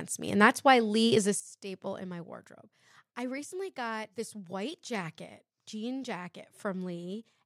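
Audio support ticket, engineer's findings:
Sudden gain jump at 1.40 s, right after "is a". Likely cause: a gain setting or bit shift applied in one step with no ramp, in the digital gain stage. Level drops about 14 dB between adjacent samples and stays down to the end of the clip. Speech and background noise fall together, so the step is audible as a level change in the whole signal.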